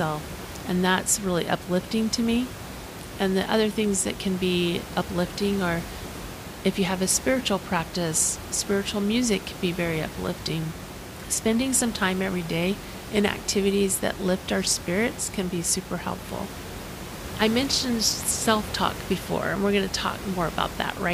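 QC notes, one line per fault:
No technical faults are present in the speech signal; the room's own background noise sits about 12 dB below the speech and belongs to the recording itself.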